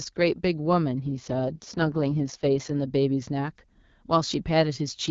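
From 1.01 to 2.74 s the speech turns rough, raspy and synthetic, with no gap and no change in bandwidth, pointing to an AMR rate drop: the AMR-WB link falls from 12.65 to about 6.6 kbit/s, then restores the clearer HD Voice rate.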